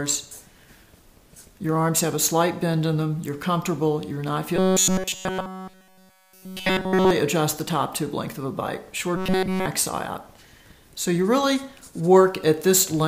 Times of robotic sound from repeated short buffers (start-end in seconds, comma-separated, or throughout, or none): 4.56-7.11, 9.17-9.66